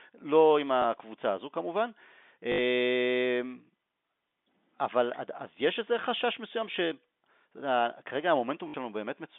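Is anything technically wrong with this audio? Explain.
Yes. There is packet loss with the last packet repeated, on speech carried over a G.711 telephone line band of about 150 Hz to 3.6 kHz. Dropouts at 0.82–0.84 s and 6.72–6.74 s each last 20 ms, which fits one lost packet. Those at 2.52–2.58 s and 8.68–8.74 s last 60 ms, which suggests about three. The receiver replays the previous chunk out of step with the pitch, producing a small blip for the single repeats and a brief robotic buzz near 50 Hz for the runs. On a waveform this appears as identical repeated segments with jumps at the joins. On a spectrogram it shows as vertical click lines and frozen, repeated harmonics.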